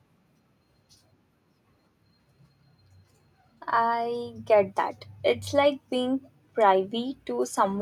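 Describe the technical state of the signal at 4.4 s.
At 4.4 s the speech signal is intact, with no dropout, clipping, glitch or other fault to be heard.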